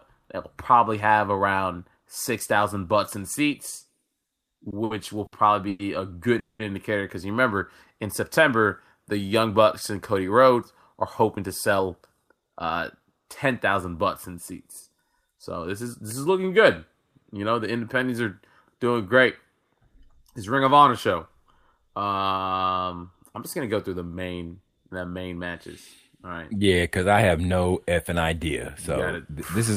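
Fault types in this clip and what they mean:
Repeated stalls (stutter): The jitter buffer kept running dry because packets arrived late or too slowly. Each time, the receiver stretched the last bit of sound to bridge the wait. Between 4.27 and 5.82 s the speech catches seven times, with 320 ms filled in. The longest hold lasts 110 ms, and about a fifth of that stretch is filler. Nothing is lost, but the speech drags and stutters.
Call audio freeze: From 6.39 to 6.62 s the speech stops for about 200 ms. Almost all of that, 190 ms, is silence. Then the speech resumes exactly where it left off, with nothing skipped. The likely cause is packets held up in transit, which emptied the jitter buffer. The receiver had nothing to play until they arrived, so the stop adds a gap instead of removing any speech.
Jitter buffer speed-up: The buffer had built up more delay than it wants. To cut it, the receiver trimmed many tiny pieces, each a pitch period or so long. 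From 10.51 to 13.25 s the speech plays at 107% speed, dropping roughly a fifth of a second in total. From 27.14 to 27.47 s it runs at 111%, losing around 50 ms. The pitch stays put, but the delivery sounds hurried.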